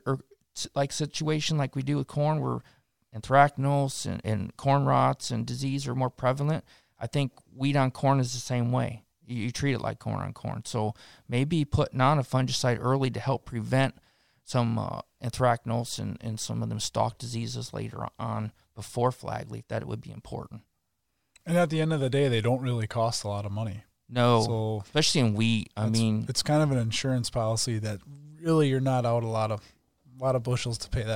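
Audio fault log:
No faults in this speech.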